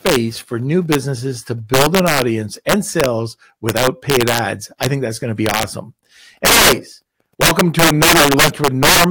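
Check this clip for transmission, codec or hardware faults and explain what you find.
Integer overflow runs through the whole speech clip. The signal is driven about 12 dB too hot, and a few percent of samples exceed the integer limit. Instead of being held at full scale, those samples wrap to the opposite sign, so every loud peak flips straight across the range. The result is violent cracks on the louder syllables, far harsher than clipping. On the waveform, peaks jump from top to bottom rail; a spectrogram shows broadband vertical streaks at each one.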